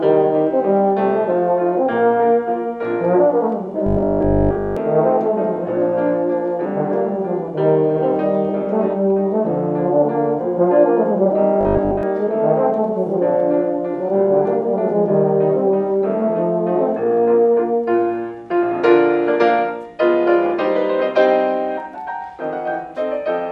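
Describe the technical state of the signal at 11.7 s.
At 11.7 s the sound collapses into a rigid, metallic buzz at 50 Hz, lasting from 11.61 to 12.03 s. This is robotic sound from repeated short buffers, likely caused by a roughly 20 ms slice being replayed in place of most of the incoming audio.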